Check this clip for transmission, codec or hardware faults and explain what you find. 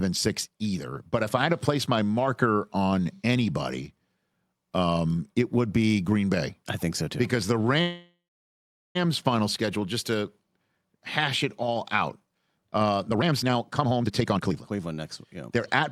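Two transmission faults are present, both consistent with network delay on a call path.

From 7.81 to 8.97 s there is a call audio freeze: the last sound is stretched into a fading tail, then about 800 ms of silence, before resuming at "final schedule just to". This was likely caused by delayed packets draining the jitter buffer. Roughly 1.14 s of gap is inserted, with nothing lost.

From 13.09 to 15.83 s, after "it all out uh", a jitter buffer speed-up runs the speech at about 138% of normal rate without a pitch change. The receiver trims short pitch-period segments repeatedly to shed excess buffered delay, removing around a second in total and making delivery sound hurried.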